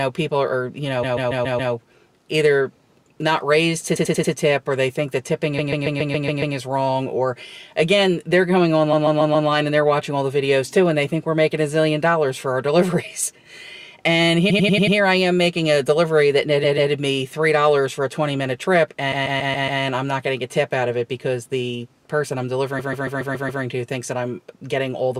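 The audio stutters from repeated frames at 1.02–1.72, 3.95–4.32, 5.58–6.55, 8.92–9.48, 14.49–14.96, 16.63–16.91, 19.11–19.81 and 22.78–23.62 s. A block of 139 ms, or 93 ms at 3.95 and 14.49 s, replays two to seven extra times, as compressed frames were written or sent more than once.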